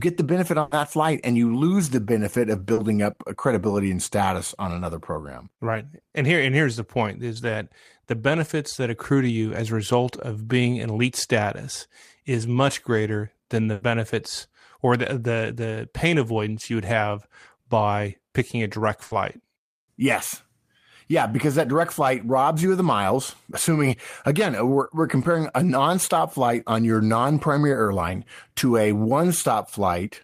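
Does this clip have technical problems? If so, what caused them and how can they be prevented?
Yes. There are three bursts of packet loss. The first runs from 0.61 to 0.73 s, between "the benefit" and "flight and you lose". The second runs from 13.73 to 13.83 s, after "much greater than the". The third runs from 19.05 to 19.13 s. In each, a run of audio arrived too late or not at all. The receiver stretched the last sound and faded it for 100, 80 and 60 ms respectively. The real audio then resumes, with that stretch gone. Stronger jitter buffering and redundancy or forward error correction on the network link would prevent these losses.

There is also one short concealed packet loss, from 2.73 to 2.79 s. It falls between "lose the benefit of" and "up credibility and status". About 40 ms never reached the decoder in time. The decoder filled the hole by continuing the preceding sound, then blended back into the real signal. 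The result is a brief smear at that point, and 40 ms of the original is lost. A steadier connection with in-band forward error correction would prevent it.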